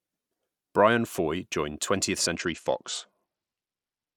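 From 2.35 s to the end, the speech shows a Bluetooth SBC bit pool drop. The treble dulls abruptly and a gritty quantisation noise rises, which fits the encoder cutting its bit pool from about 31 to 11, around 83 kbps, starving the upper sub-bands.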